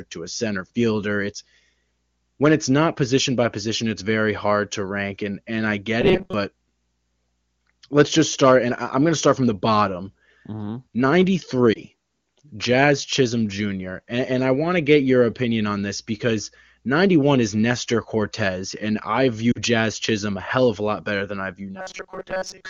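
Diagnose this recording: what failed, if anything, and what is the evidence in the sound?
Robotic sound from repeated short buffers at 6.02 to 6.34 s, after "rank and and I", and from 21.76 s to the end, after "better than I view". A stiff 188 Hz buzz replaces most of the sound. The likely cause is a driver or buffer stage looping a chunk of about 5 ms.

Lost AMR speech frames on the network path: a 20 ms warble at 11.74 s, and a 40 ms dip toward near silence at 19.52 s after "and I". The decoder filled each gap from the last good frame at falling gain.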